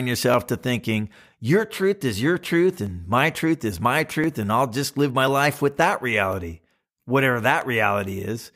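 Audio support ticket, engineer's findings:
Six sharp single clicks in speech at 0.34, 2.87, 4.24, 5.28, 6.33 and 7.62 s. Likely dropped samples, under a millisecond lost each time, so the waveform jumps.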